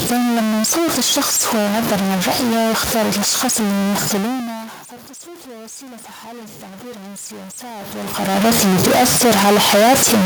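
A speech recording carries distortion from start to finish, and its pauses are never clean but filled with noise that sits on top of the ordinary room noise. The likely cause is a stuck bit: one data bit held permanently at 0 or 1 somewhere in the converter or its wiring, so that roughly half the sample values are pushed off by that bit's weight in a pattern that follows the waveform, and even near-silent passages flip around it and turn into noise. A second fault comes from the automatic gain rising between 5.24 and 7.35 s. The input level fell by about 20 dB, consistent with the talker moving away around 4 s, and the gain control answered by gradually raising its gain by about 5 dB over roughly two seconds. As a result, voice and background swell upward together across that stretch instead of the level changing only with the talker, as it does again around 8 s.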